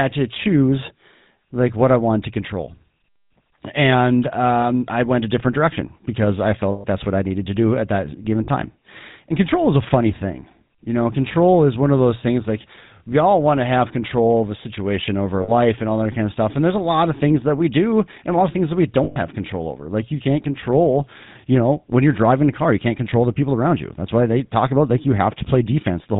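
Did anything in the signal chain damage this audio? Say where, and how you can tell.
Yes. GSM full-rate codec damage runs throughout this speech at the codec stage. Nothing comes through above 4 kHz, and a buzzy, gravelly roughness from pulse-driven vocal-tract modelling fits 13 kbps full rate.

Lost GSM frames occur on the network side at 6.72–6.85, 8.44–8.49, 15.42–15.52 and 19.04–19.17 s. At each gap the last good frame repeats as a rough metallic ring.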